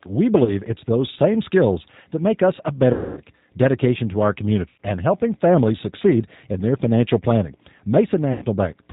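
Throughout, the speech sounds band-limited, slightly rough and synthetic, with nothing above 4 kHz. This is plainly audible G.729 codec damage, consistent with the 8 kbit/s G.729A variant, which rebuilds each frame from a vocal tract filter, a pitch predictor and a few pulses.

At 0.45–0.53 s, 2.93–3.22 s, 4.68–4.80 s and 8.33–8.46 s, the speech smears into a buzzy tone or coloured noise that fades, and stays weak just afterward. This is VoIP packet loss concealed by the speech codec. The decoder extrapolates the last pitch and filter over gaps of about 20, 240, 100 and 90 ms.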